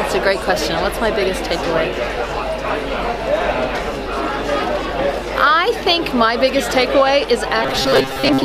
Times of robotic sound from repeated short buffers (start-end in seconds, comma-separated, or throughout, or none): 7.63-8.45